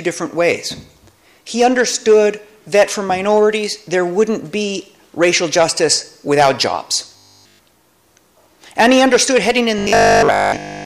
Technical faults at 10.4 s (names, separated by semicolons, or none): robotic sound from repeated short buffers